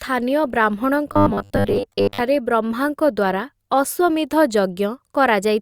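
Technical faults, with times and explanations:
0.00–4.12 s, adaptive stream starting at a low bitrate: The audio opens on a low-bitrate version of the stream, consistent with Opus at about 32 kbit/s. The player starts this way so playback begins quickly. The treble is missing or synthetic and codec artefacts are stronger. At 4.12 s the quality rises abruptly, with no gap. That jump fits a move to about 64 kbit/s once the connection was measured.
1.12–2.21 s, robotic sound from repeated short buffers: The sound becomes a rigid, metallic buzz at a steady 100 Hz while still roughly tracking the speech. The likely cause is audio arriving too seldom, so the software fills the gaps by looping the last chunk, and the real audio is skipped. A 100 Hz buzz points to chunks of about 10 ms. Most of this span, around two-thirds or more, is repetition rather than fresh sound.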